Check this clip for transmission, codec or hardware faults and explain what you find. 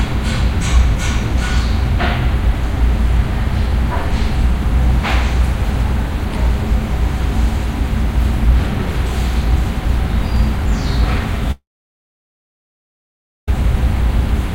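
One fault stands out: a long network dropout from 11.51 to 13.48 s. The last sound carries on briefly as a fading buzz. Then about 1.85 s of silence follows. This is likely a long network gap, concealed and then muted. The sound resumes without the lost 1.96 s.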